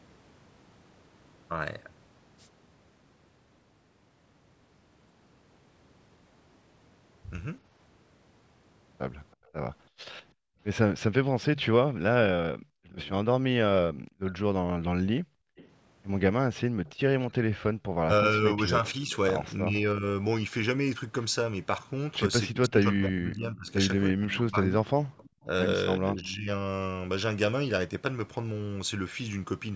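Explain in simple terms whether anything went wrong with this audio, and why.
Three call-processing faults appear in this speech. An echo leak, likely from a speakerphone's echo canceller missing part of the loudspeaker sound, sends back a faint copy about a third of a second late, at 9.32–11.92 s, 15.56–19.16 s and 23.68–26.26 s.

Background gated by the echo canceller makes the room sound suddenly drop out while the loudspeaker plays, for about half a second within 9.4–10.59 s and again at 15.21–15.56 s.

Speech suppressed in double talk makes the voice dip or cut out in pieces, about five seconds in total between 12.39 and 26.48 s, likely because both sides talked at once.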